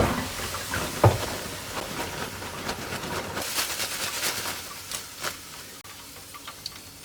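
Everyday sounds, with two faults. From 0 to 3.42 s, de-emphasis applied wrongly dulls the audio: a smooth treble roll-off leaves 10 kHz about 11 dB below 1 kHz, as though a de-emphasis stage ran where no pre-emphasis existed. Gaps at joins of encoded pieces appear at 1.80 s (9.3 ms) and 5.81 to 5.84 s (32 ms), four seconds apart. These are short gaps with smeared edges from untrimmed encoder delay and padding left between separately encoded segments.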